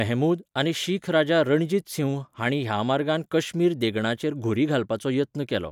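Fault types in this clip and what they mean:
No fault types can be heard in this clip.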